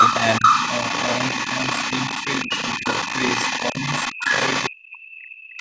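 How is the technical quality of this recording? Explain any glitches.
The recording has call-processing faults throughout, on audio band-limited to nothing above 8 kHz.

Speech suppressed in double talk: From 0.00 to 3.23 s the speech dips by up to about 10 dB, for roughly a second in total. From 3.59 s to the end the dips go as deep as about 40 dB, for around 1.5 s in total. This is likely an echo canceller turning down the talker along with the echo while both sides spoke.

Other side's voice leaking through: From 0.00 to 4.98 s a second voice sits only about 5 dB below the speech. A brief scrap returns at 5.49 s, about 25 dB down. This is likely loudspeaker playback that the echo canceller did not fully remove from the microphone.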